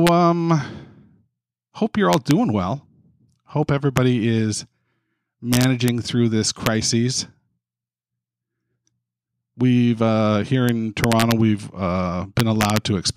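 Integer overflow cracks the speech at 0.07 s, 2.13–2.31 s, 3.97 s, 5.53–5.88 s, 6.66 s, 10.69 s, 11.04–11.32 s and 12.40–12.77 s. Peaks only about 0 to 1 dB over the limit wrap to the opposite sign, appearing as large vertical spikes on the waveform and bright broadband columns on the spectrogram.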